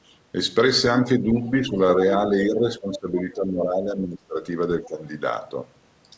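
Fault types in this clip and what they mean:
Speech suppressed in double talk: with both ends talking at once, the echo canceller likely couldn't separate the talker from the loudspeaker echo, so it ducked everything. The voice dips about 10 dB at 0.89–1.3 s and 1.5–1.79 s, sinks about 15 dB through most of 2.22–4.42 s, and again at 4.86–5.02 s.
Other side's voice leaking through: the far end's voice, played on the talker's loudspeaker, likely wasn't fully removed from the mic. Brief scraps slip through at 2.94–2.98 s, 3.17–3.23 s and 4.84–4.88 s, each only a few tens of milliseconds and sitting roughly 15 to 25 dB under the talker.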